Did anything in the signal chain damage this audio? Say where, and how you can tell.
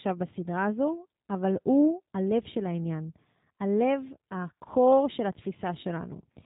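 Yes, at the codec: G.729 coding throughout, nothing above 3.8 kHz, and a rough, synthetic texture from pulse-based rebuilding, which fits 8 kbit/s and which plain low-pass filtering wouldn't add.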